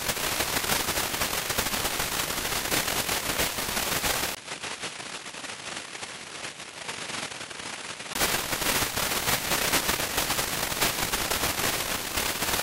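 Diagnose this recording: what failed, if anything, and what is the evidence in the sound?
Between 4.35 and 8.15 s the sound turns duller and noticeably quieter, with a short gap of about 20 ms at the change, nothing above 11.4 kHz, and a different background noise well below the signal. This is likely an input switched to a poorer device at the driver stage.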